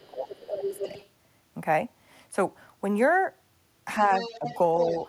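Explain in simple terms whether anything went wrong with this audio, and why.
Two things went wrong here, both tied to a call where the other side was playing on a loudspeaker.

First, speech suppressed in double talk: from the start to 0.88 s, and again briefly at 4.39 to 4.47 s, the talker's voice dips noticeably quieter. The echo canceller likely couldn't tell this voice from the loudspeaker echo, so it turned everything down.

Second, the other side's voice leaking through: a fainter second voice sneaks in from 0.27 to 1.08 s, 4.01 to 4.58 s and 4.8 s to the end. That's likely the far end playing on the loudspeaker, which the canceller didn't fully remove.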